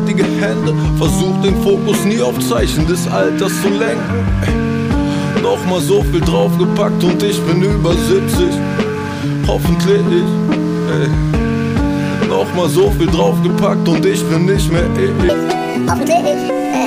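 From 15.29 s to the end, a section plays at the wrong speed, 1.71 times too fast. Pitch jumps about ten semitones, hurried and high. Likely a mismatched clock.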